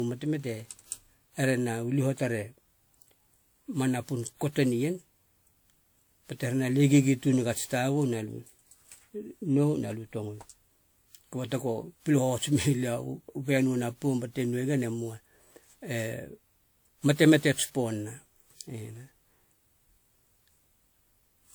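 Speech with generation loss throughout, sounding swirly, hollow and smeared with blurry attacks, likely from a handful of re-encodes through a lossy codec, fitting roughly 96 kbit/s WMA.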